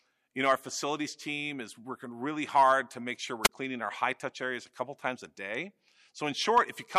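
At 3.43 to 3.49 s, between "hard to make sure" and "cleaning our high touch", a wireless microphone squelch dropout occurs: the radio link fades, hiss swells, then the receiver mutes for about 20 ms. A waveform shows a flat gap; a spectrogram, broadband noise then a blank column.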